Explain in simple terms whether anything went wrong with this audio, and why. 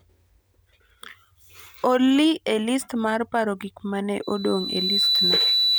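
Something did go wrong near the end. Just after "paro gik ma ne", at 4.22 s, loudspeaker feedback squeal begins: the microphone is hearing its own loudspeaker, and a single pitch around 4 kHz keeps feeding back on itself. Unlike a steady interfering whistle, which sits at one loudness from the start, this tone swells from nothing over about three-quarters of a second into a piercing squeal, louder than the speech, and lasts until the clip ends.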